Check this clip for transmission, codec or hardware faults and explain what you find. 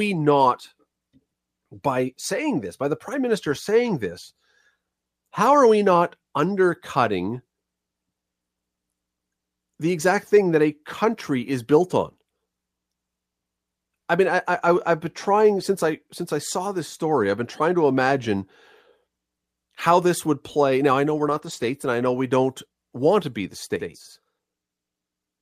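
Two faults are present: packet loss covered by error correction, and a channel delay that doubles the sound.

Lost packet rebuilt from error correction, at 3.51 to 3.53 s (between "by the prime minister" and "saying this"), at 10.35 s, and across 21.25 to 21.67 s (after "I know we're", before "and I know we"). Each lost packet was replaced by a low-bitrate copy carried in the next one. Nothing drops out. Those stretches turn briefly rough and noisy. The late span adds up to about 220 ms of rebuilt audio.

Channel delay (doubling), from 23.76 s to the end, starting after "want to be the". One channel runs about 93 ms late, which fits a 4096-sample buffer. The two channels are mixed to mono. A second copy follows at equal level, heard as a slap-back doubling.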